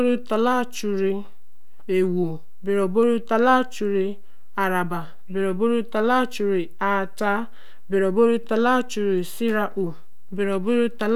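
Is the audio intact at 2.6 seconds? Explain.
No. At 2.6 seconds the speech carries a DC offset, as it does for the whole clip. The waveform sits shifted from zero by a constant of about -29 dBFS. It adds no audible sound, but it eats headroom and shows as steady energy at 0 Hz.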